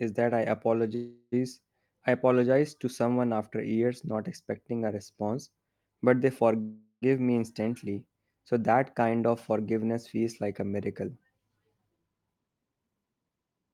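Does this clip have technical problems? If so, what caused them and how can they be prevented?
Yes. Two call audio freezes likely come from packets held up in the network, draining the jitter buffer. From 0.95 to 1.34 s and again from 6.61 to 7.04 s, the last sound is stretched into a fading buzz, ending in brief silence, about 20 ms and 80 ms respectively. The speech then resumes where it stopped, with nothing lost but roughly 0.4 s of delay added each time. Prioritising call traffic with QoS or using a steadier connection, together with an adequately sized adaptive jitter buffer, would prevent these stalls.

The jitter buffer speed-up follows once the buffer has filled beyond its target. From 11.67 to 13.71 s the receiver cuts many pitch-period-sized pieces, roughly 0.3 s in total, so the speech plays at 112% speed with unchanged pitch and sounds hurried. Letting the buffer shed excess delay more gradually, or during pauses, would avoid the audible rush.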